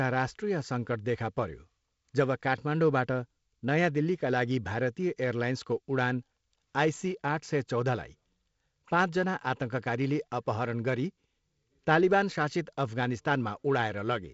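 Nothing stood out on listening to this speech clip, which carries the band-limited sound of wideband telephone coding.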